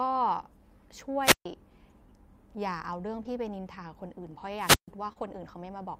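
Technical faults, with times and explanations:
1.22–1.46 s and 4.56–4.90 s, wireless microphone squelch dropout: the radio link fades, hiss rises, then the receiver mutes for about 140 ms before the speech comes back.
3.23–3.27 s and 5.13–5.24 s, short concealed packet loss: 20 ms of audio went missing each time, and the decoder patched it by extending the previous sound, leaving a brief smear.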